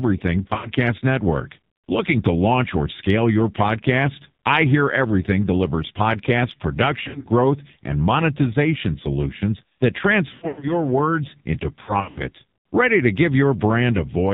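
Throughout, the speech passes through the AMR narrowband mobile codec at a very low rate, which fits 5.9 kbps. Nothing above 4 kHz survives, and the voice is heavily buzzy and synthetic. A plain telephone band filter would sound dull but natural, without this vocoder-like texture.

Lost AMR speech frames occur at 0.48 to 0.71 s, 7.04 to 7.28 s, 10.34 to 10.74 s and 11.84 to 12.20 s. Radio errors made frames fail, so the decoder repeats the last pitch and vocal tract settings at falling gain. The sound smears and warbles, and in the 10.34 s burst it fades toward silence. The speech then returns rough. The concealment gives a drawn-out, fading smear, unlike a hard dropout's abrupt silence and click.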